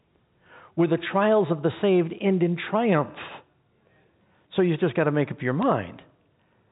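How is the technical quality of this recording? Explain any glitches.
Telephone-band audio in G.711 coding, with nothing above 4 kHz, and one brief glitch near the end.

At 5.62 s, just after "to make up your", bit errors on a digital phone line strike the signal. A few flipped bits, roughly one in a thousand, each corrupt a single sample, and a high-order hit jolts the waveform. Unlike packet loss, nothing drops out, and the surrounding speech stays intact.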